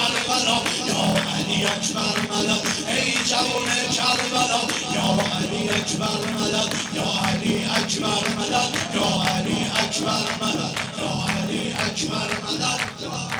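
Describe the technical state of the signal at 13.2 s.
At 13.2 s the block size mismatch (padded) is present, as it is throughout the clip. Each block, which fits 1024 written samples, is padded with zeros to a longer read size. This gives a 38.3 Hz buzz and playback at 0.889× speed with near-normal pitch. A waveform shows evenly spaced silent notches, and a spectrogram shows regular vertical gaps with buzz harmonics.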